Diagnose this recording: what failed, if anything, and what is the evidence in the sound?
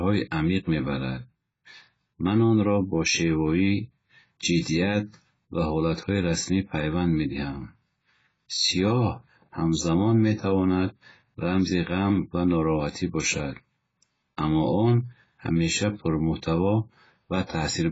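Throughout the speech, the spectrum stops dead at 7.6 kHz, leaving a flat empty band above it on a spectrogram, with smeared, warbling sibilants and a dull, fizzy texture. This is heavy codec damage, likely AAC compression at a very low bitrate, which fits roughly 16 kbps.

Pre-echo appears at 4.60 s, 12.91 s and 17.47 s, as hiss running ahead of sharp attacks for 54 ms, 41 ms and 29 ms. On a waveform, low noise rises before each onset. On a spectrogram, broadband smear leads the attack. The codec spread its block's quantisation noise backward into the quiet moment before the transient.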